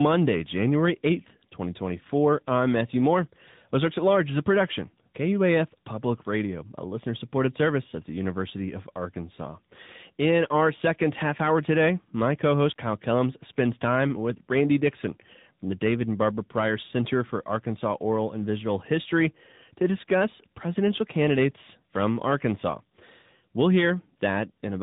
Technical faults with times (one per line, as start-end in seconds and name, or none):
0.00-24.82 tandem speech coding